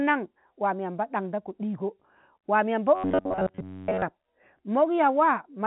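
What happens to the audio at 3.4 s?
Right at 3.4 s you're in the middle of a stretch of robotic sound from repeated short buffers, running from about 2.95 to 4.02 s. The speech turns into a stiff, metallic buzz pitched at about 94 Hz that still roughly tracks the talking. That's likely the playback repeating a chunk of around 10.7 ms over and over while fresh audio was skipped, with most of that stretch being repeats. The usual telephone-band ceiling near 3.9 kHz carries on underneath.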